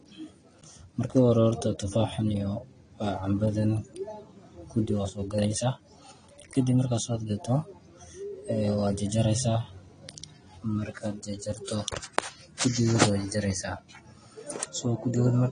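Likely AAC compression at a low bitrate, around 32 kbps, throughout: the encoder discards everything above 10 kHz, leaving the speech dull, smeared and fizzy on sibilants.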